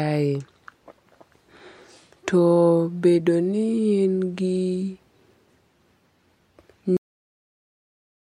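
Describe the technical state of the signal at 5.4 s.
At 5.4 s the speech signal is intact, with no audible fault at that moment.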